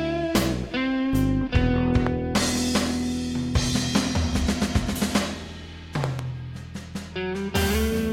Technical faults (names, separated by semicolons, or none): loud pop